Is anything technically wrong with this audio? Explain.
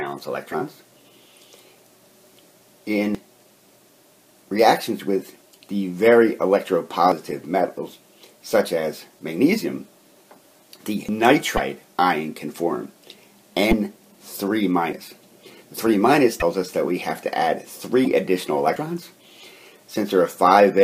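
Yes. Five brief glitches, likely caused by a broken MP3 bit reservoir: at 0.51–0.54, 11.56–11.59, 13.70–13.73, 16.39–16.42 and 18.04–18.06 s. When frames go missing from an MP3 stream, the following frame reaches back for bits it stored in its predecessor and reads unrelated data instead. Each time the audio skips forward and a burst of roughly 25–30 ms of chirp, noise or dropout appears, which fits one corrupted frame of about 26 ms.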